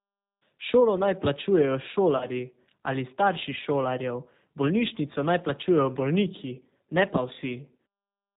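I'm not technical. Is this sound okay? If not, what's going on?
No. The whole clip passed through the G.729 codec, a phone-call compression method that rebuilds speech from a simplified model of the voice and discards everything above 4 kHz. The speech stays understandable but sounds muffled, slightly rough and somewhat artificial throughout.

From 2.17 to 2.27 s there is VoIP packet loss concealed by the speech codec. About 40 ms of audio went missing in transit, and the decoder filled the gap by stretching out the last bit of speech it had while fading it down. That moment comes out as a brief buzzy or noisy, smeared sound, and the speech stays weak or distorted for a short while after.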